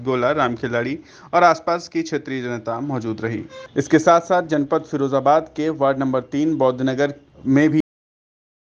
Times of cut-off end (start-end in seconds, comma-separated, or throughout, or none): 7.80-8.79